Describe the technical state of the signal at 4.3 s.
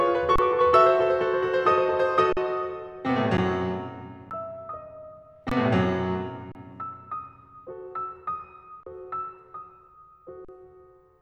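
At 4.30 s the music drops into an underrun with held sample: the output buffer ran dry for about 11 ms, a gap of 512 samples, and the converter froze on its last value. The waveform flattens, then resumes after roughly 10 ms of audio was skipped.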